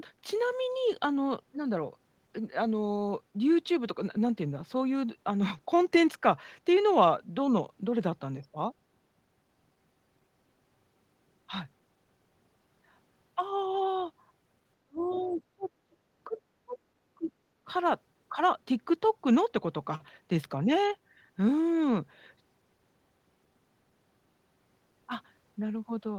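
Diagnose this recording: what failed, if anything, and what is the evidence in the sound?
The speech ducks hard from 14.87 to 15.69 s, falling by roughly 30 dB at its deepest, then keeps breaking up in short dips at 15.86–15.98, 16.28–16.38, 16.64–16.75, 17.15–17.31 and 17.63–17.71 s. The later gaps range from shallow (around 15 dB) to near-silent (around 35 dB). This is speech suppressed in double talk, a call-processing fault. The echo canceller likely could not tell the near talker from loudspeaker echo while both sides spoke, so it attenuated everything.

Inside the first dip, between 15.03 and 15.34 s, a second, faint voice surfaces, sitting about 25 dB under the main speech. This is the other side's voice leaking through, also at the call-processing stage. The far end's audio, played on the near device's loudspeaker, reached the microphone, and the echo canceller left a residue of it in the send path. 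This likely happened because the same double-talk confusion disrupted its echo estimate.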